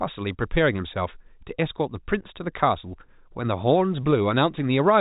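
Nothing stood out on listening to this speech recording, which has the narrow, telephone-band sound of G.711 coding with no content above about 3.8 kHz.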